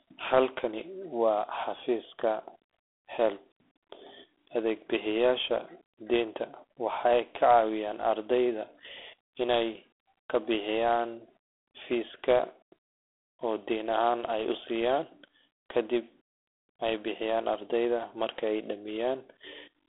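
The clip is speech carrying G.726 ADPCM damage from start to end. The band runs from about 300 Hz to 3.4 kHz, and nothing sounds above 3.8 kHz. A harsh, rasping hiss rides on the speech and rises and falls with its level. The coder sends only a few bits per sample of the error left after an adaptive prediction. Too few bits leave coarse steps as noise. The roughness fits the 24 kbit/s mode.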